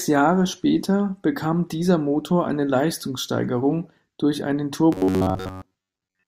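From 4.93 s to the end at 6.28 s, just after "durch einen", the speech turns into robotic sound from repeated short buffers. It becomes a rigid, metallic buzz near 93.8 Hz. The likely cause is audio arriving too seldom, so the software keeps replaying a short stretch of about 10.7 ms. That repeat length sets the fixed buzz pitch. Most of the real audio in this stretch is skipped.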